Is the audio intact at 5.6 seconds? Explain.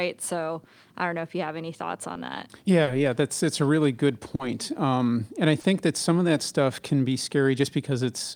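No, short concealed packet loss hits 5.61–5.65 s after "and i": 20 ms never arrived, so the decoder extended the preceding sound, leaving a brief smear.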